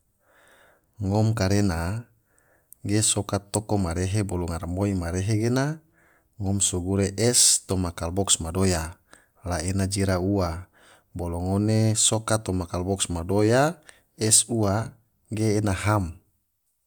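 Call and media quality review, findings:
No faults heard in playback.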